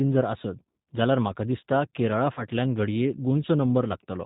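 Throughout, the speech passes through the G.729 codec at 8 kbit/s, rebuilt from a filter and sparse pulses. Nothing above 4 kHz survives, and the sound is plainly rough and synthetic.

From 2.34 to 2.45 s, just after "जाल्यार म्हाका दिसता", 30 ms of audio went missing, which fits one lost packet. The VoIP packet loss concealed by the speech codec stretches the preceding sound into a fading buzzy tone or coloured noise that stays weak while the decoder recovers.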